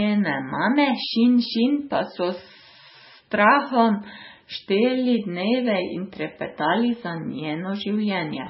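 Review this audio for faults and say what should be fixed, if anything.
Throughout the clip the speech is dull, with nothing above 5.6 kHz. It sounds watery and swirly, with chirpy s sounds. This is likely heavy MP3 compression, at a bitrate that fits about 16 kbps. The encoder cut the treble and zeroed weak frequency lines, which flicker between frames. Encode at 128 kbps or higher, or keep a lossless master.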